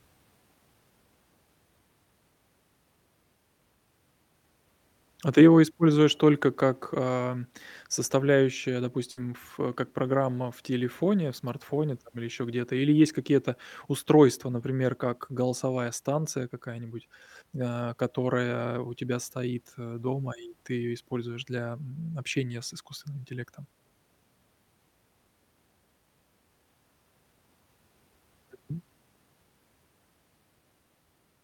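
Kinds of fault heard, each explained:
Burst of packet loss: a run of packets never arrived, so the receiver stretched the last sound for 56 ms while fading it, then jumped ahead, skipping 60 ms of speech. A spectrogram shows a flat, dimming smear; the waveform shows a decaying repeat, then a discontinuity.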